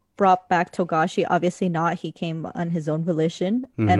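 Nothing goes wrong anywhere in this short bit of speech, so there's no fault to point to at any moment.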